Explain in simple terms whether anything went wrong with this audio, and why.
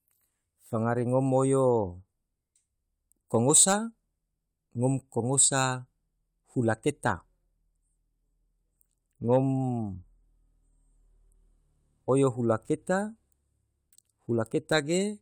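Nothing went wrong here: the speech recording has no technical faults anywhere along its length.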